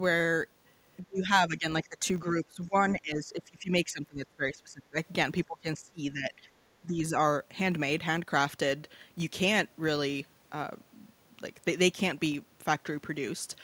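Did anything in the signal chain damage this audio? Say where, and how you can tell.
Yes. A 50 Hz buzz that tracks the speech level runs throughout. This is a filter restarted on every block in processing: its state resets every 20 ms block.

In call processing, the speech dips by up to about 25 dB at 1.0–1.31, 1.47–1.66, 1.83–2.06, 2.41–4.96, 5.46–6.45 and 6.82–7.12 s. This is likely speech suppressed in double talk by the echo canceller.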